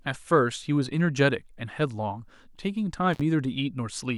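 At about 3.13 s there's an intermittent contact, where a loose cable or plug briefly lost connection. The speech drops out for roughly 47 ms, with crackle as the line breaks and reconnects, and faint hiss underneath until it comes back around 3.21 s.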